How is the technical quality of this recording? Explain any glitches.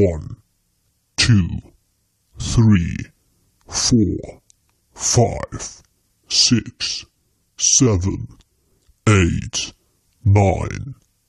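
No glitches turn up anywhere in this recording, so there's nothing here that needs explaining.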